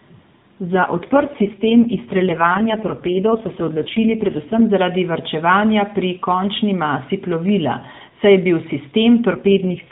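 From 0.74 s to 4.62 s the speech turns buzzier and more synthetic, then recovers just before "zaradi varčevanja pri končni". This is an AMR rate drop. The codec falls back to a mode that fits 4.75 kbps instead of 12.2 kbps, spending fewer bits on the vocal-tract model and pulses. The narrowband limit stays put and nothing drops out. The same rough, synthetic quality returns from 9.32 s and lasts until the end of the clip.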